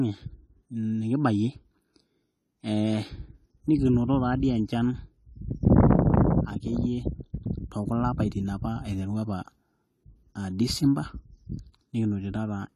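Speech throughout, with plainly audible AAC compression: nothing above 14 kHz, a smeared, warbly top end on sibilants, likely from AAC-LC at a low bitrate, roughly 32 kbps.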